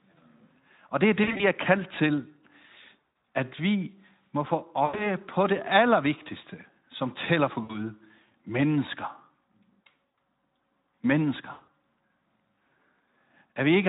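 Speech with six brief dropouts where the sound smears into a fading buzzy tone or coloured noise: at 1.23–1.45 s just after "det er", at 3.26 s before "at vi må få", at 4.85–5.10 s ahead of "på det allervigtigste som", and at 7.63–7.84, 9.92 and 11.51–11.68 s. This is VoIP packet loss concealed by the speech codec. The decoder extrapolates over gaps of roughly 60 to 160 ms, and the weakened sound lingers briefly afterwards. The Speex coding throughout adds only light damage.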